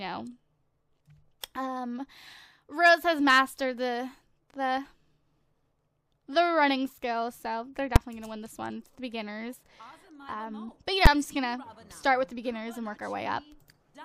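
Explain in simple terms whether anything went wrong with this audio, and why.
Two sharp, very loud bangs break into the sound, one at 7.96 s and another at 11.06 s. Each lasts only a few thousandths of a second, about 5 ms and 11 ms, so it comes across as a single crack. This is the fault called invalid numbers at full scale: a calculation produced impossible values, and the output jumped to its loudest possible level for one short processing block before recovering.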